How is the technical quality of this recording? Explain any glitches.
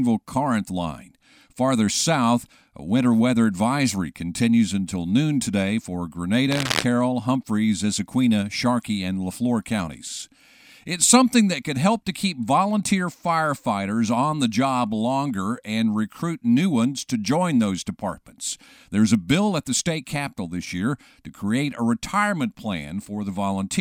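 The speech carries one clear glitch. From 6.51 to 6.84 s, just after "until noon today for", a harsh scratching, rustling burst sits over the speech, only a little quieter than the speech itself. This is cable scratch noise. The likely cause is a worn cable, plug or connector being moved. Its contact resistance jumps around rapidly, and that injects a dense, irregular crackle into the signal for about a third of a second.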